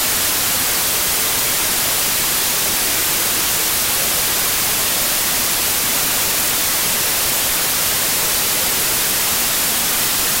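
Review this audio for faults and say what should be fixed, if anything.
Wrong sample width, throughout: music written as 32-bit integers is read as 16-bit, so each sample splits into two values. One keeps the real top bits and the other is low-order noise. The music lies buried in loud noise, at half speed and an octave down.

To prevent it, read the data with the sample width it was written with, taking that from the file header rather than assuming 16-bit.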